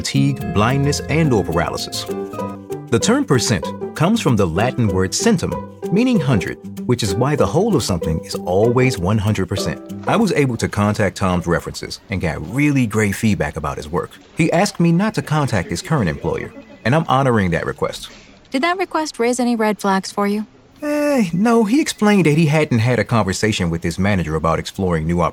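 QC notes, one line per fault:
No fault found; no QC notes to log.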